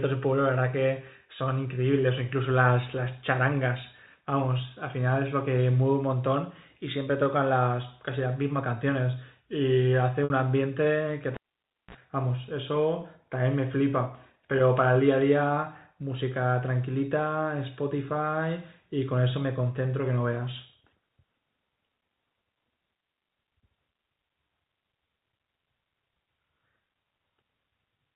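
At 10.24 s there is packet loss with pitch repetition lasting 60 ms. Data went missing, and the receiver filled the hole by repeating the last pitch period of the speech and letting it fade. The repeat is short, so it sounds like a brief held, buzzy note. The gap length fits three lost packets of 20 ms each. The voice then resumes and blends back in.

At 11.34 s a cable was pulled and plugged in. There is a pop, and then the sound drops out for about 0.56 s. As the plug goes back in, only the tip touches first, and a burst of 60 Hz mains buzz comes through for about 37 ms. A second pop follows at 11.95 s when the signal returns. The telephone-band coding underneath holds its 4 kHz limit throughout.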